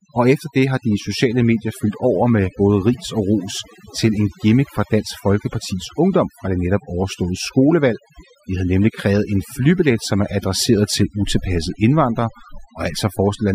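A noise reduction stage was pushed far too hard on this speech recording, and the overdone noise removal runs through the whole clip rather than at any single moment. Frequency bands that sit close to the tool's noise estimate are being pulled down or switched off entirely, so the gaps between phrases collapse into near silence dotted with twinkling specks. Softer parts of the voice get caught by the same gating.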